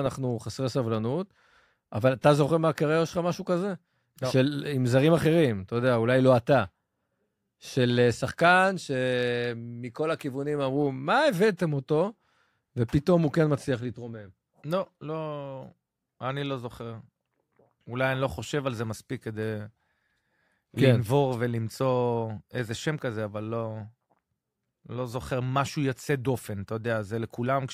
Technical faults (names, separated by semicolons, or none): none